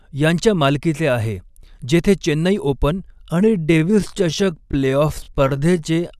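From 3.2 s to the end, the speech is a time-stretched section. The pace abruptly slows to about 0.67 times, while pitch stays unchanged. Software likely repeated short pieces to lengthen it.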